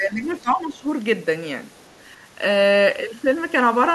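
From 0.0 to 0.87 s, the echo canceller likely mistook overlapping talk for echo, causing speech suppressed in double talk: the voice dips, by up to about 15 dB, for most of that span. At 1.77 to 1.93 s, incomplete echo removal likely lets the other side's voice leak through, a faint scrap roughly 40 dB below the talker.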